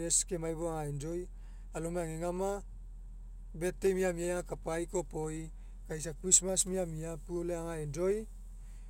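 Speech with periodic USB or driver dropouts from 0.12 s to 8.74 s. Small ticks repeat every 0.125 s, about seventy in all. Each time, a tiny slice of audio, a fraction of a millisecond, is skipped outright. The steady spacing points to a background task blocking the bus or driver.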